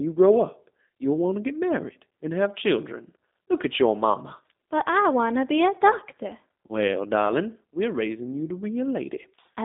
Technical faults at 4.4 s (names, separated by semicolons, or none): G.729 codec